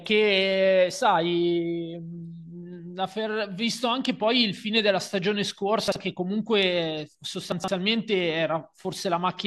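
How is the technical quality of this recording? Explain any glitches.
The recording has two chunks out of order in the speech. At 5.88–5.96 s, one 40 ms chunk plays one slot late. At 7.52–7.68 s, a chunk arrives three slots late. Each misplaced piece sits after audio that should follow it, leaving three hard joins around a brief jumbled moment. Unlike a dropout or a stutter, nothing goes missing and nothing repeats. The sound is all there, just shuffled.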